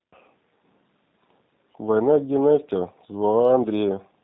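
The whole speech clip has passed through a G.729 codec, likely the G.729A variant at 8 kbit/s. Nothing above 4 kHz survives. The voice sounds rough and synthetic throughout.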